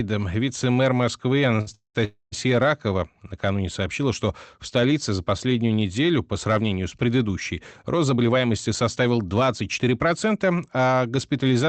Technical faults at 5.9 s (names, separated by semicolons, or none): none